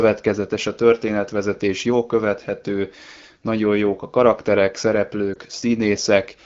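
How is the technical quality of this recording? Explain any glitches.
A brief glitch near the end of this speech: at 5.33–5.37 s the sound dips and warbles. These are lost AMR speech frames. The decoder bridged a failed frame by reusing the previous pitch and vocal-tract settings at lowered gain, which fits a single 20 ms frame being dropped. The AMR wideband (HD Voice) codec carries the speech at a clear rate with light coding texture.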